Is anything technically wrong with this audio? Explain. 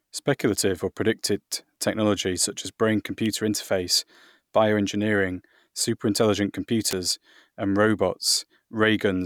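Yes, the speech carries two electrical switching spikes. One is a sharp snap at 3.26 s, after "predicted technology such as". The other is a louder snap at 6.91 s, after "interface bioengineering superintelligent". Each likely comes from a nearby switch or motor arcing briefly and inducing a spike onto the audio line.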